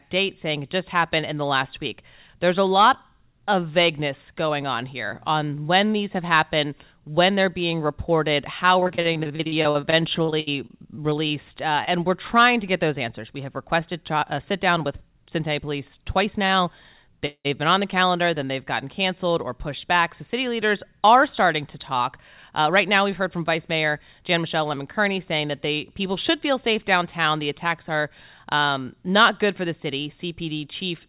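Starting at 8.8 s, right after "they're being reported how", there's a stretch of repeated packet loss (robotic sound) running to about 11.31 s. Packets keep going missing, 24 separate gaps in two and a half seconds, the longest 65 ms. Each hole gets patched by extending the sound just before it, so close to a quarter of that span is made-up audio. It comes across as choppy, with bits dropped out.

Just after that, at 11.85 s, there's a short concealed packet loss of about 20 ms. The receiver filled the hole by carrying the last sound forward and then blending back into the real signal. It's only a brief smear or wobble, but a short consonant-sized piece can disappear with it.

At 16.46 s there's a short stall from a late packet. A packet didn't arrive on time, the jitter buffer ran dry, and the receiver held the last sound for about 32 ms until the packet showed up. Nothing is lost. One sound simply hangs on a touch too long, with a faint buzz.

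From 17.26 to 17.47 s, just before "been on the calendar", there's a call audio freeze. The last sound is stretched into a fading buzz and then drops to around 70 ms of silence before the audio resumes where it left off. That whole pause of about 0.19 s is inserted time, with nothing missing. It's most likely packets held up in the network long enough to empty the jitter buffer.

Then, after "are starting to talk", from 22.19 to 24.34 s, there's a jitter buffer speed-up. The buffer had built up more audio than it wanted, so the receiver cut out tiny pitch-period-sized slices over and over, removing around a tenth of a second in total. Playback runs at about 105% speed with the pitch unchanged, so that passage sounds slightly hurried. Throughout the clip, the G.711 call path caps everything at 4 kHz, which gives the audio its narrowband phone-line quality.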